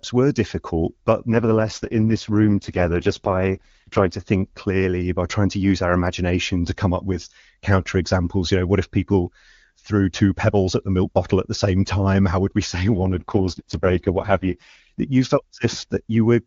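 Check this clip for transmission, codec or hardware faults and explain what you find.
Two AMR rate drops affect the speech. The first runs from 1.32 to 4.14 s, starting after "were difficult but" and clearing before "think clearly by trying". The second runs from 12.95 to 15.00 s. A weak radio link makes the network lower the codec rate and spend the bits on error protection. The band stays wide, and nothing cuts out. The voice turns rough, raspy and synthetic. That fits a fall from the top wideband rate, near 23.85 kbit/s, to the lowest, near 6.6 kbit/s.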